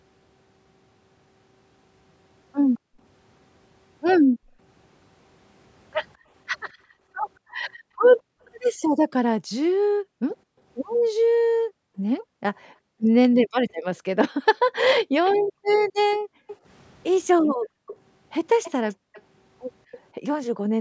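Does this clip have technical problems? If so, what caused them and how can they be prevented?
Yes, two kinds of fault affect this speech clip.

Background gated by the echo canceller: the room sound dips by about 40 dB at 2.79–2.99 s, 4.26–4.59 s, 18.96–19.13 s and 20.59–20.7 s, and more extensively within 6.17–13.02 s (around three seconds in total) and 14.55–17.87 s (around a second and a half). Each time the far-end loudspeaker was active, the canceller clamped the microphone path, so the background vanishes and then returns. Unlike an echo leak, nothing extra is added. The ambience is simply removed. To prevent it, use a headset or tune the canceller's suppression to be less aggressive during double-talk.

Echo leak: a faint delayed copy of the speech, trailing by 266 ms, appears at 15.26–16.56 s (about 15 dB below the speech) and at 17.87–19.98 s (about 20 dB below). The likely cause is a loudspeaker on one end whose echo canceller failed to fully remove what its microphone picked up, sending the residue back. 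Unlike gating, this adds a ghost repeat with a fixed lag rather than a gap. To prevent it, lower the loudspeaker volume or switch to headphones so the canceller has less echo to remove.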